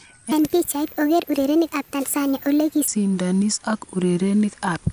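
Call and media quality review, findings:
Wrong sample rate, 0.32–2.88 s: speech high and hurried, about 1.45x speed, pitch up about 6.5 semitones, consistent with a 22 kHz stream clocked out at 32 kHz without resampling. Spectrogram: harmonics and formants shifted up together, syllables compressed in time.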